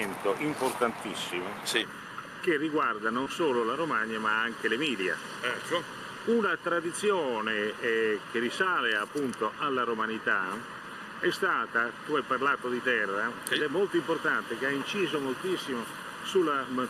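From 1.82 s to the end of the clip, channel delay (comb filtering) sets in. One channel arrives a little under a millisecond behind the other, and when the two are summed to mono, the shared content cancels at a series of evenly spaced frequencies, the first at roughly 700 Hz. The fixed notches leave the sound hollow and phasey, a colouration that persists unchanged.

At 3.23 to 3.30 s, short concealed packet loss occurs. About 20 ms of audio failed to reach the decoder in time. The receiver bridged the gap by extending the preceding sound, synthesising roughly 23 ms of fill and dropping about 4 ms during the blend back into the real signal. The result is a brief smear or wobble in the sound, on top of the comb-filtered colouration already present.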